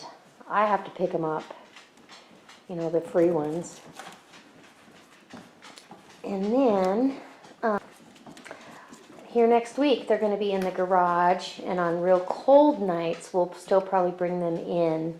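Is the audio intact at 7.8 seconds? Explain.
No. At 7.78 seconds there is damaged data in the compressed stream. It is a single brief event, not a sustained fault. Some bytes in the encoded stream are wrong at that point, so the decoder cannot read those frames correctly. It loses its place and hunts for the next valid frame header before playback resumes. The result is a short chirp, squawk or blip that breaks the sound at that instant.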